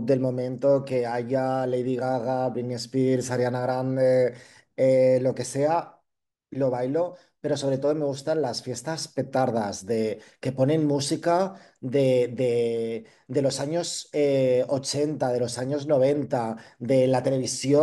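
No technical faults can be heard anywhere in the recording; the signal holds steady and intact throughout.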